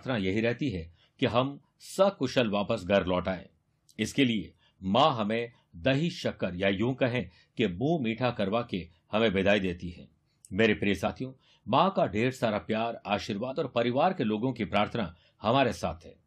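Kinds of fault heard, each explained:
Damaged data in a compressed stream: Corrupted bytes in the encoded speech make the decoder misread frames and lose sync until it finds the next frame header. Three brief blips result, at 7.19 to 7.21 s, around 11.07 s, and 13.50 to 13.53 s.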